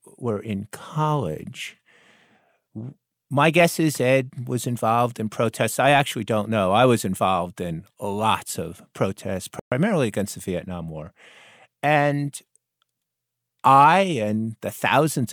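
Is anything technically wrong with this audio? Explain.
Yes. At 9.60 to 9.72 s the speech drops to silence for 122 ms, then resumes. That's likely a Bluetooth stall: delayed packets let the headphones' buffer run dry.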